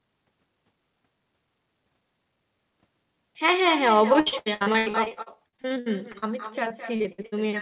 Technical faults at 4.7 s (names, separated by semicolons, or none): echo with no canceller; repeated packet loss (robotic sound)